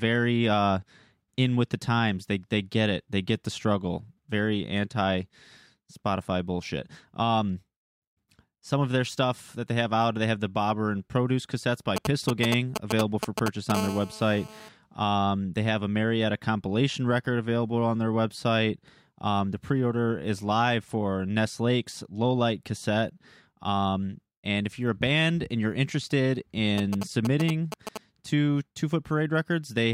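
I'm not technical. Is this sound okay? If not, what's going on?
No. There are two related disturbances, both caused by a mobile phone near the recording equipment.

From 11.96 to 13.72 seconds, and again from 26.78 to 27.98 seconds, a galloping dit-dit-dit of short buzzes cuts across the speech. In the first stretch it is roughly as loud as the speech; in the second it is a little quieter. These are GSM signalling bursts: an older 2G phone sends short groups of radio pulses while it checks in with the network, and the audio circuitry turns those pulses into sound.

Straight after the first stretch, from 13.75 to 14.69 seconds, the bursts give way to a continuous hard, raspy buzz, quieter than the speech. This is GSM phone buzz. Once the phone is on an active call, it transmits its radio pulses about 217 times a second without pause, and the circuitry picks them up and turns them into this steady, gritty hum.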